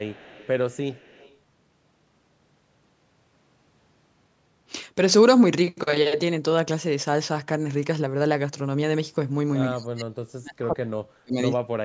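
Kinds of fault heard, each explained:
Echo leak: from 0.02 to 0.49 s and again from 0.69 to 1.37 s, a faint delayed copy of the speech trails it by 130 ms, the likely result of a loudspeaker's output reaching the far microphone and escaping its echo canceller. It sits about 25 dB below the speech at first, then about 30 dB.
Speech suppressed in double talk: from 9.7 to 11.36 s and from 11.53 s to the end, the speech drops in pieces by as much as about 40 dB. The likely cause is an echo canceller that treated this talker as echo while both sides spoke and pulled everything down.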